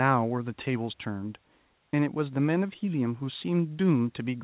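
Nothing's actually wrong with this bit of speech; it came over a call line, and the way nothing reaches above 4 kHz is just what a standard 64 kbps telephone codec like G.711 mu-law does on that path.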